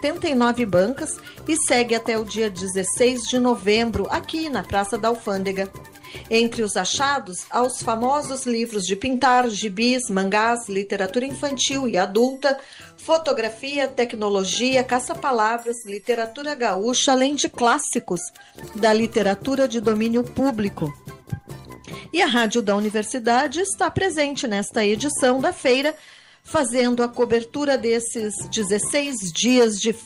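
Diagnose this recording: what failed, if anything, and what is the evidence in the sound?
Nothing failed; no stage shows any audible fault.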